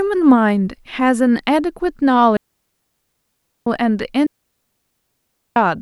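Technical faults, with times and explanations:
2.37–3.67 s and 4.26–5.56 s, digital wireless dropout: the speech twice falls into a clean hole of near silence lasting 1.3 s, with no crackle or noise burst at either edge. The receiver lost too much data from the wireless link and muted itself with a very quick fade until the signal recovered.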